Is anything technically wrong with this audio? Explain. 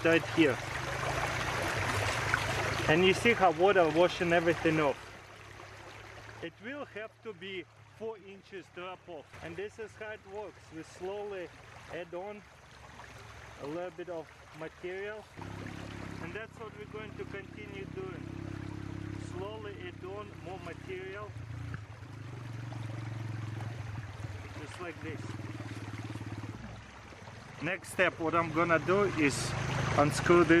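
Yes. Zipper noise occurs from 4.74 to 5.29 s and again from 27.54 to 27.93 s. In both places the level moves in unsmoothed 1 dB jumps, about forty per second: first dropping by roughly 15 dB, then later rising by about the same amount. Each jump is an abrupt discontinuity in the waveform that produces a tiny click, so a rapid ticking, zipping texture rides on the sound while the level is changing.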